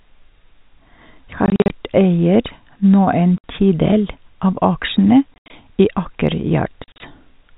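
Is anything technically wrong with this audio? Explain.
Yes. The speech is broken up by packet loss filled with silence, in four places: 1.46–1.70 s, 3.38–3.44 s, 5.34–5.50 s and 6.84–7.00 s. Packets went missing and the receiver played nothing in their place. The gaps come in steps of 20 ms, which fits 20 ms packets. The worst stretch is 5.34–5.50 s, with an 80 ms run of silence. Each hole starts and stops abruptly, so the speech sounds chopped. The telephone-band G.711 coding underneath is working as expected.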